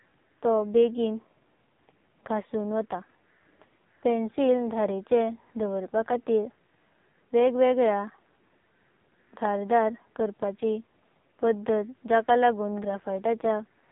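From start to finish the speech carries heavy AMR narrowband mobile codec damage. Nothing above 3.8 kHz survives, so it sounds thin and boxed-in. The low bitrate, which fits the 5.9 kbps mode, gives the vocal-tract model little to work with, leaving a buzzy, synthetic edge.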